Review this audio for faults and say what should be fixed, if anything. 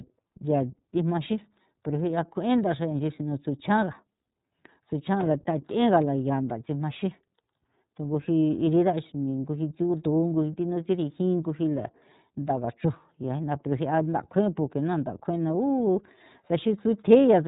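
iLBC codec damage throughout: the sound stops at 3.8 kHz and sounds rough and synthetic, because each 30 ms frame is coded independently, fitting roughly 13.33 kbps. Prevent it by recording or transmitting through a wideband codec at a higher bitrate.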